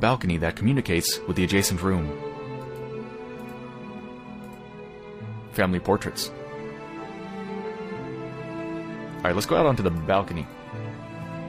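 At 11.34 to 11.39 s, damaged data in a compressed stream makes the decoder lose frame sync, giving a brief glitch seen as a broadband smear and waveform discontinuity.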